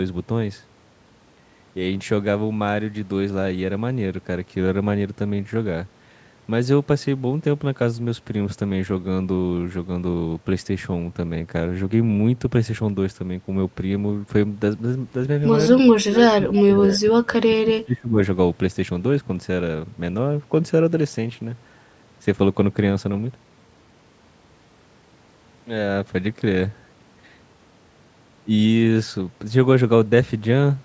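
A speech recording in which, from 15.96 to 18.19 s, the voice sinks sharply, by around 25 dB at its deepest, over roughly two seconds. That is speech suppressed in double talk, likely from an echo canceller mistaking overlapping talk for loudspeaker echo and turning the talker down. The call microphone processing leaves nothing above 8 kHz.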